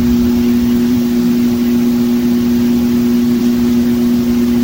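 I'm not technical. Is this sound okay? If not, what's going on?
No. The sound skips forward three times, a fault called compressed frames skipped. At 0.91 s it jumps ahead by roughly 150 ms, at 2.21 s by roughly 50 ms, and from 3.37 to 3.41 s by roughly 100 ms. Each time, small chunks of the stored audio were lost or rejected while playing, so the playback leaps past them. The jump sizes fit chunks of about 46 ms each. Unlike a dropout, there is no silent gap.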